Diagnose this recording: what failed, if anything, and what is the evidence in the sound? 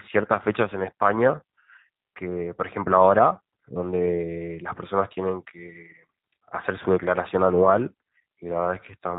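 The damage sits at the codec stage: G.729 coding, throughout the speech. Nothing above 4 kHz survives. The voice sounds rough and slightly synthetic. That fits an 8 kbit/s coder rebuilding each 10 ms frame from a vocal tract filter, pitch prediction and a few pulses.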